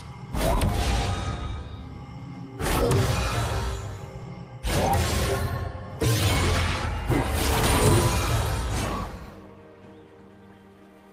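No dropouts, clipping, glitches or other technical faults can be heard anywhere in the recording.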